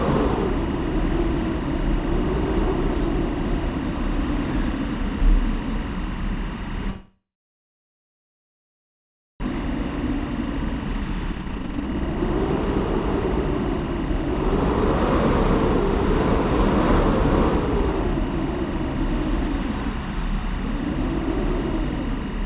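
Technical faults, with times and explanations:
Throughout, timecode bleed: a steady chirping warble sits behind the sound at about 20 dB below it. Linear timecode running at 24 frames per second has leaked in from a neighbouring track or cable, and because the code is a square wave flipping between two pitches near 1 kHz and 2 kHz, it comes through as a fast two-tone twitter. The call path's 4 kHz ceiling leaves both tones fully audible.
6.9 to 9.46 s, long network dropout: the sound breaks off and the last moment is stretched into a fading buzz before the gap settles into silence or a faint steady noise for roughly 2.2 s. When the audio returns, it picks up further on, with about 1.6 s never heard. The likely cause is a delay jump of around a second in arriving packets, during which the receiver had nothing to play and could only conceal the hole.
10.66 to 14.44 s, jitter buffer speed-up: the audio runs at about 122% speed with its pitch unchanged, so it sounds hurried and any rhythm loses its steadiness. 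The jitter buffer held more audio than it aims for, and the receiver worked the surplus off by cutting out short slices of a pitch period or so, over and over, removing roughly 0.7 s of audio in all.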